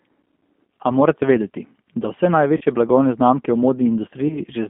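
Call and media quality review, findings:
G.729 codec, whole clip: band-limited to roughly 200 Hz–3.4 kHz, rough synthetic edge plainly audible; the sound points to 8 kbit/s CELP rebuilding speech from filter, pitch and sparse pulses.

VoIP packet loss concealed by the speech codec: 2.57–2.63 s and 4.28–4.39 s, buzzy or noisy smeared fade, slow recovery. Decoder extrapolating over 40 ms (fits two packets), then 20 ms (one).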